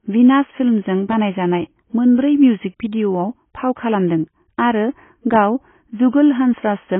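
From start to end the speech sounds dull and smeared, with nothing above 3.8 kHz and a fizzy warble on sibilants. Heavy AAC compression at a low bitrate is the likely cause.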